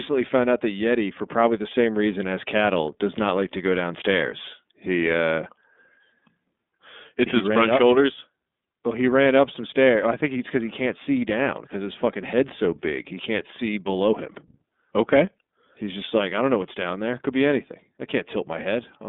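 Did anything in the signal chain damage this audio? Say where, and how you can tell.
Yes, the damage comes from the codec stage and runs through the whole speech clip: an iLBC codec. The sound is confined to a telephone band of about 200 Hz to 3.6 kHz and has a plainly audible rough, slightly synthetic texture. A simple band-limiting filter would narrow the sound but leave it smooth. Here each frame's excitation is coded independently, and the roughness fits 30 ms frames at about 13.3 kbps.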